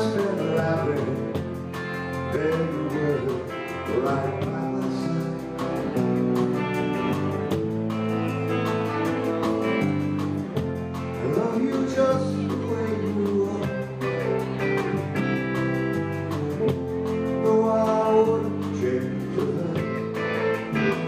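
Nothing here calls for a timestamp, since no technical fault turns up anywhere in the audio.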